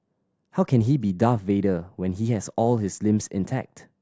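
No technical faults occur at any point in the recording, so there is nothing to describe in time order.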